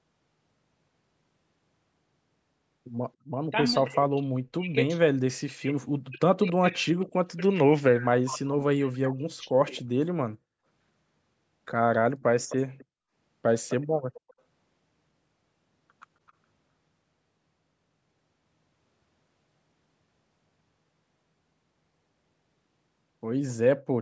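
From 3.88 to 9.7 s the speech is repeatedly pushed down, in total for around four seconds, at its deepest by something like 40 dB. It dips, thins and breaks into pieces rather than dropping out cleanly. This is speech suppressed in double talk, likely because the far side was talking at the same time and the echo canceller, unable to separate the local talker from its loudspeaker echo, attenuated everything. Unlike a network dropout, the cuts follow the overlap and leave fragments of the speech audible.

Within and after that stretch, faint delayed copies of the speech come back, trailing the original by about 0.26 s. The short scraps are at 6.48, 8.93, 9.77 and 16.27 s, and the longer ones run from 12.2 to 12.85 s and from 13.69 to 14.33 s. The longer ones are the loudest, while the scraps at 8.93 and 16.27 s are barely there. This is echo leak, likely residual loudspeaker pickup that the canceller failed to remove and sent back. 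The fixed delay and the intermittent copies set it apart from room reverberation, which would decay smoothly and continuously. Throughout the clip, the band stops at 8 kHz.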